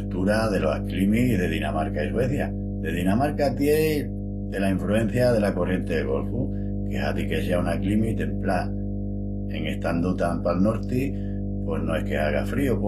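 Right from the start and all the way through, there's mains hum: a steady 50 Hz tone, probably from a ground loop or a nearby transformer leaking power-line voltage into the signal. It sits close to the level of the speech itself, so it's hard to ignore.

The codec damage is plainly audible for the whole clip too. The treble sounds rebuilt rather than real, and nothing comes through above 14.9 kHz. That's likely HE-AAC compression at a low bitrate, something like 24 kbps, copying lower bands upward so the harmonics don't line up.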